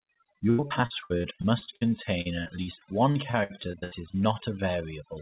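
Overdone noise removal runs through the whole clip. The noise suppressor was set too hard, so any frequency band near its noise estimate is pulled far down or switched off, and softer parts of the speech are removed with the noise. The background drops and breaks up into small twinkling specks. This sits on top of a telephone-band sound with nothing above 4 kHz, consistent with G.711 mu-law at 64 kbps.

Repeated packet loss (robotic sound) runs from 0.5 s to 4.16 s. Packets kept going missing through this stretch, and each hole was patched by extending the last bit of audio. Soon after one patch, the next gap arrives. The choppy, clipped texture suggests roughly two dozen short dropouts. The longest lasts about 84 ms, and close to a quarter of the span, around 0.84 s in all, is filled in this way. The result is a choppy, stuttering voice with fragments missing.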